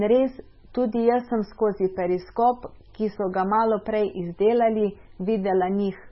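From start to finish the speech sounds watery and swirly, with a warbling, metallic edge on s sounds and softened, smeared onsets, and nothing is heard above 5.6 kHz. The likely cause is heavy MP3 compression at a very low bitrate, which fits roughly 16 kbps. Starved of bits, the encoder has chopped off the treble at a fixed point and dropped quieter frequency detail that flickers in and out from frame to frame.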